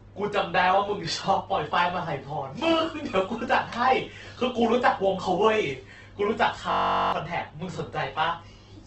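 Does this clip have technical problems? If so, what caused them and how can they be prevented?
Yes. Opus compression is present throughout the 9-second speech clip. Nothing is heard above 8.1 kHz, and the speech sounds rough, grainy and noisy rather than swirly. That points to an encoder in its music (CELT) mode that kept each band's energy but, starved of bits, filled the detail with noise or folded-up copies of lower bands. The heavy damage fits a low bitrate of around 12 kbps, likely the cause here. To prevent it, encode speech with Opus at a higher bitrate or let it use its speech mode.

A system hang loop runs from 6.72 to 7.13 s. A 21.3 ms slice of audio repeats exactly, about 19 times, so instead of speech there is a steady buzz at 46.9 Hz. The computer or audio driver stalled while the sound hardware kept replaying the same ring buffer, which fits a 1024-sample buffer, and roughly 0.4 s of real audio is lost. 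To prevent it, give the audio thread priority and find what blocks the system or driver.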